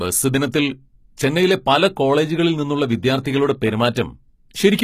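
Throughout the speech, treble sounds gritty and metallic with nothing above 14.9 kHz. This is likely HE-AAC compression near 20 kbps, whose rebuilt treble does not match the harmonics below, unlike plain low-pass dulling. At 3.24 s and again at 3.95 s, a brief hiss of about 13 ms runs just ahead of an attack and softens it. This is pre-echo, where block-spread quantisation noise leaks backward, unlike a click, which lands on the attack itself.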